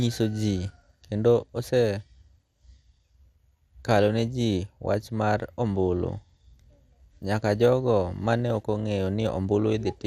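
Throughout the speech, the audio has most likely passed through MP2 compression at a bitrate too low for it, which fits an 80 kbps stream. The encoder divides the spectrum into 32 sub-bands and, lacking bits, shuts off the top ones entirely, so nothing survives above about 15.1 kHz. The bands that remain are coarsely quantised and switch on and off, giving a dull tone with a plainly audible gurgling, granular roughness on the speech.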